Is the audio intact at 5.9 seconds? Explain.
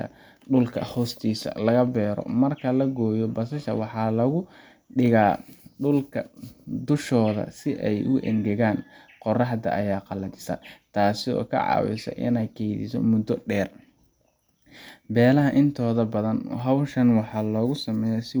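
Yes, at 5.9 seconds the speech plays through intact, with no dropout, click, distortion or other fault at that moment.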